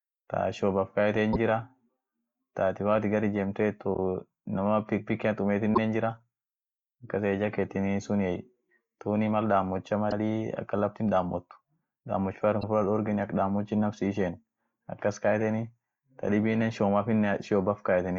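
Speech with repeated frames at 1.32, 5.74, 10.10 and 12.61 s, where a slice of 26.1 ms (first two) or 52.2 ms (last two) plays twice, fitting one or two duplicated compressed frames. Each is a brief stutter, and a spectrogram shows the same pattern twice.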